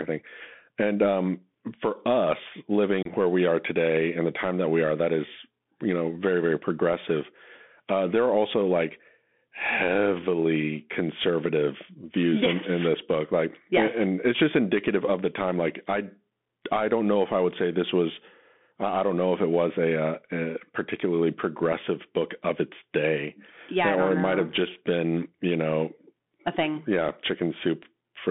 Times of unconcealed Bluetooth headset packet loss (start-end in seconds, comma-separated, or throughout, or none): 3.03-3.08